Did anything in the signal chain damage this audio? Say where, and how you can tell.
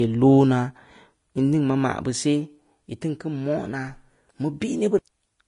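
Yes, at the codec stage, throughout the speech. Nothing is present above 10.6 kHz, and the treble sounds hissy and grainy, with smeared consonant attacks. That points to likely Vorbis compression, at a low rate around 33 kbps, where coarsely quantised high bands turn into noise.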